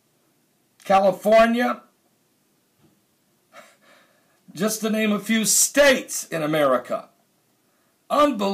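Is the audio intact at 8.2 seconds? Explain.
No. Hard clipping runs from 8.14 to 8.25 s. The signal is driven about 6 dB past what the stage can pass, so its peaks are sliced flat. Those squared tops add high harmonics. The result is a brief, harsh crackle.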